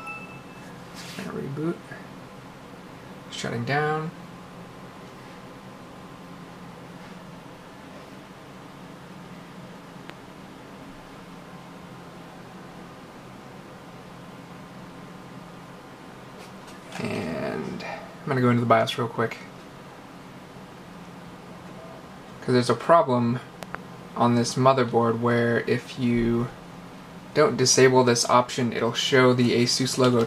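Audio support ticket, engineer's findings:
Loud pop at 10.10 s, roughly 10 dB above the sound. Double loud pop at 23.63–23.77 s, roughly 15 dB. Sound continues underneath. Likely voltage transient from plug, switch or static.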